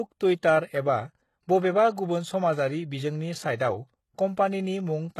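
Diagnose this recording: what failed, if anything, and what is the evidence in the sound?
The codec stage is where this went wrong. The whole clip carries plainly audible coding damage. The treble is there but sounds synthetic: sibilants come out gritty and lispy, and nothing reaches above about 12.3 kHz. That points to HE-AAC compression as the likely cause, at a rate that fits something around 16 kbps. Only the low band is really coded. The top is rebuilt by copying lower bands upward, so the harmonics above the crossover don't line up with the real ones.

There's also a pre-echo, again a codec problem, from 3.56 to 3.60 s. A short hiss creeps in for about 39 ms before an attack, and the attack itself sounds softened and smeared. The transform block containing that onset spread its quantisation noise across the whole block. The noise was sized for the loud part, so it leaked into the quiet stretch just before it.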